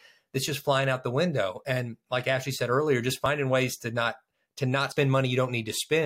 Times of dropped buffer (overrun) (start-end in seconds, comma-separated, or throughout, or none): 3.26, 4.92